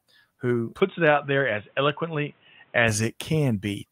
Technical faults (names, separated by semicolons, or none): input switched to a poorer device